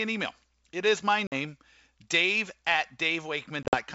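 At 1.27 to 1.35 s the speech drops into a hard-edged silent gap of about 50 ms, a packet loss on an ADPCM call of roughly five packets. Because the decoder's adaptive predictor and step size no longer match the sender's, the speech resumes with slight distortion. A second loss runs from 3.63 to 3.76 s, with about 80 ms missing in holes scattered over 100 ms, the longest 50 ms. The G.722 wideband coding carries content up to 7 kHz with at most faint hiss.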